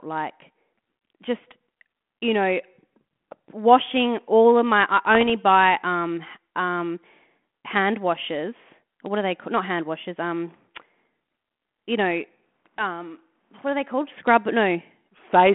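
A short pop with a rough edge at 1.72 to 1.74 s, then a longer patch of crackly, uneven bursts with jumpy level from 5.15 to 5.31 s, are bit errors on an ADPCM link. Flipped bits, a small fraction of a percent, corrupt the coded differences, and the decoder's step size and predictor go astray and take milliseconds to recover. The band limit of about 200 Hz to 3.4 kHz fits a 32 kbit/s G.726 path.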